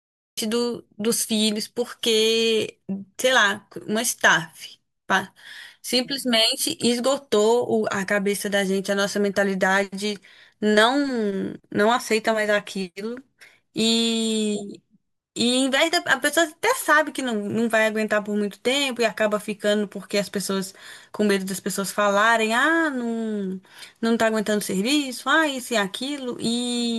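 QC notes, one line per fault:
0.00–0.38 s, cut-off start: the clip opens on digital silence, then the speech begins abruptly at about 0.38 s, already in the middle of a sound, with no natural onset or fade. Capture or streaming began late, so the start of that sound was never recorded. Unlike a fade-in, the level doesn't ramp up. Unlike a dropout, there is no earlier audio before the gap, so nothing is interrupted and resumed.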